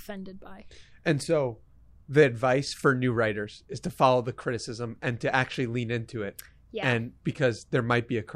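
Nothing in the speech recording points to a technical problem: the signal stays continuous and steady, with no disturbance to its level or timing anywhere.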